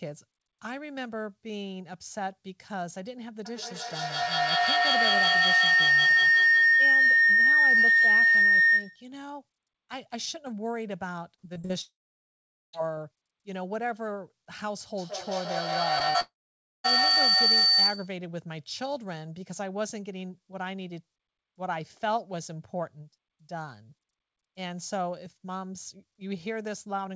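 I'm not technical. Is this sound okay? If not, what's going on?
No. From 3.45 to 9.12 s, and again from 14.98 to 18.19 s, a piercing whistle swells and pulses several times a second. This is feedback howl: two devices on the call in one room keep re-amplifying each other's sound.

From 11.36 to 11.71 s the sound turns choppy and robotic. This is repeated packet loss, where pieces of audio kept failing to arrive and were patched over.

From 11.81 to 12.75 s, and from 16.20 to 16.86 s, a brief buzz fades into silence, and that stretch is simply gone. The likely cause is a long network dropout, where the connection briefly stopped delivering audio.

At 15.99 to 16.02 s and 16.10 to 16.16 s there are tiny smears or wobbles. This is short concealed packet loss: small missing bits were filled in automatically.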